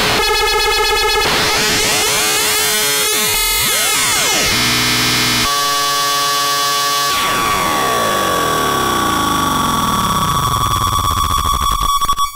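Crackle and a gritty edge sit on the loudest moments from start to finish, while quieter passages pass through cleanly. That is hard clipping: the level runs about 4 dB hotter than the stage can carry, so the tallest peaks, only a small share of the waveform at around 3 percent, get sliced flat. Those squared-off tops generate harmonics high in the spectrum, which is why the peaks crackle rather than sounding like a heavy fuzz.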